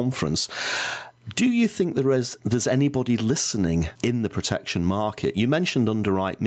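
From start to finish, the gain swings by around 15 dB. This is gain pumping, and it points to input gain set far too high, likely with a fast limiter clamping each loud syllable. The speech itself sounds flattened and squeezed. The audio stops at 8 kHz, as expected for a wideband call codec.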